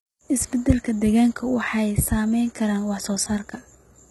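A speech clip with heavy codec damage throughout, likely from HE-AAC compression at a very low bitrate, around 16 kbps. The treble is synthesised from copied lower bands rather than coded, so sibilants sound gritty and metallic, and nothing remains above 11.8 kHz.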